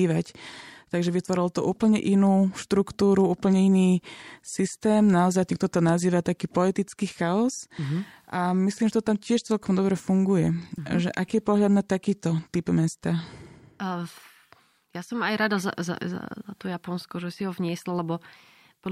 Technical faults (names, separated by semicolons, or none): none